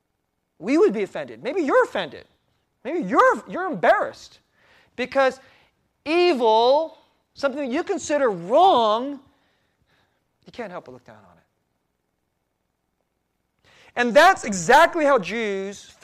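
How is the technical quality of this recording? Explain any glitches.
The recording has one recurring fault: regular clicks in the speech from 0.36 s to about 14.4 s, repeating every 2.35 s. These are clock drift buffer slips, likely from two devices whose clocks differ by several hundred parts per million, so a small block of samples is periodically dropped or repeated. On a waveform each slip is a sudden step; on a spectrogram, a thin vertical broadband line.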